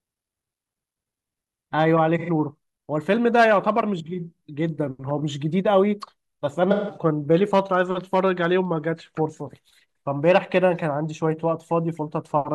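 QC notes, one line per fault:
2.18–2.29 s: AAC frame loss with concealment. A brief smeared, noisy patch of about 85 ms in the speech, consistent with two lost frames. The decoder rebuilt the gap from the last good spectrum, so the tone carries on but loses its clean detail.
6.71–6.97 s: AAC frame loss with concealment. A longer gap of about 171 ms, consistent with four lost frames. The repeated spectrum becomes phasey and sinks in level before the speech fades back in.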